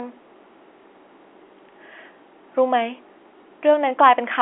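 No technical faults can be heard in this speech, which comes over a G.711 telephone line that passes nothing above 3.8 kHz.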